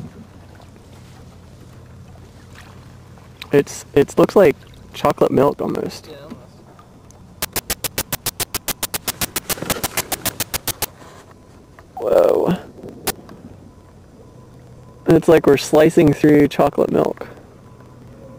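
From 0.07 s to 18.35 s the audio carries periodic USB or driver dropouts. Every 54 ms, roughly 18 times a second and around 300 times in all, a short stretch of around 10 ms goes missing. The lost audio is skipped outright rather than replaced with silence. This points to a recurring task stalling the bus or the audio driver on a fixed cycle. The joins come out as a steady train of ticks that sound wherever there is signal.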